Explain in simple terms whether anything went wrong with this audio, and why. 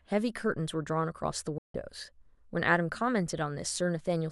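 At 1.58 seconds the speech abruptly goes silent, then picks up again at about 1.75 seconds, leaving a gap of roughly a sixth of a second. It's a digital broadcast dropout. The receiver briefly lost the digital signal, or got damaged data it couldn't trust, so it muted the sound with a very fast fade until good data arrived again. The speech sent during that gap is lost, not delayed.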